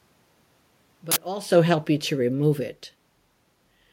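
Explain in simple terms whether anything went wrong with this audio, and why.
At 1.12 s a sudden, loud burst of harsh digital noise cuts through the speech for about 46 ms. This is an uninitialised buffer: the system played a chunk of memory before any sound had been written into it, so leftover junk came out as noise. The length fits a 2048-sample buffer.

From 1.55 s to 2.66 s the speech gradually gets quieter, and the room noise behind it sinks along with it. This is automatic gain falling: the automatic level control decided the input was too loud, or its background noise too strong, and slowly turned it down. The shift in the talker's position at about 1.5 s is separate and not a fault.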